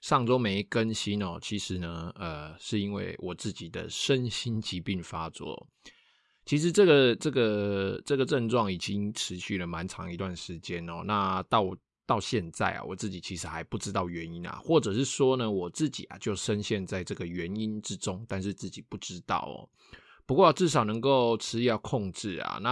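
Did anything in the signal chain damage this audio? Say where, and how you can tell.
No, nothing damaged this audio.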